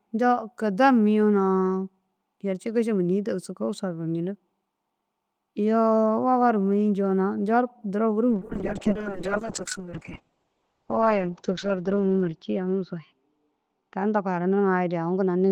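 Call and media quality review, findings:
Call bitrate drop, 8.32 s to end: coarse, watery speech, band cut from 20 kHz to 8 kHz, consistent with an encoder rate near 7 kbps. Continuous, no gaps, unlike packet loss.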